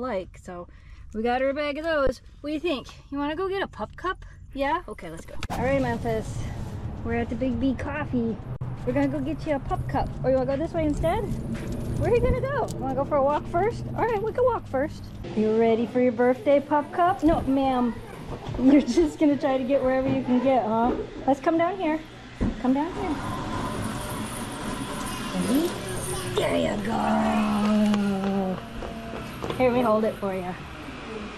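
The audio has two underruns with held sample, at 2.07 s and from 8.56 to 8.61 s. The output ran dry, so the waveform froze flat. The sound then resumed where it stopped, with nothing lost.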